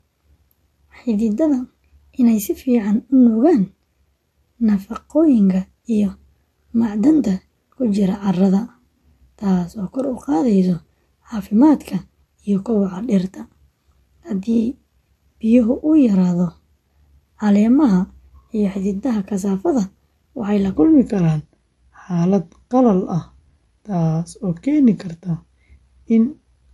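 Throughout, the speech sounds watery and swirly. This is likely MP3 compression, and the damage fits a low bitrate near 47 kbps.

From 0 to 20.77 s, the speech runs 1.15 times too fast and sits about two semitones high. This is likely a section at the wrong speed.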